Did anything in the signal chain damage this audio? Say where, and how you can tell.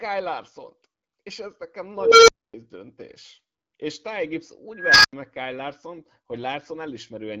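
Yes. An unstable filter in call processing hits at 1.96–2.54 s and 4.75–5.13 s: tones near 500 Hz, then 1.5 kHz, swell over about 0.3 s, clip, and cut to silence (0.26 s, then 0.09 s) as the runaway recursive filter overflows and resets.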